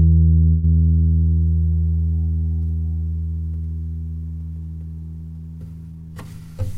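At 0.49 s the sound stalls into a fading buzz for about 136 ms before resuming where it left off, with nothing lost. This call audio freeze was likely caused by delayed packets draining the jitter buffer, so the receiver stretched the last sound until they arrived. From 5.92 to 6.73 s the audio rushes ahead at about 116% speed with unchanged pitch. This jitter buffer speed-up trims an excess backlog by cutting many tiny pitch-period slices, removing roughly 150 ms in total.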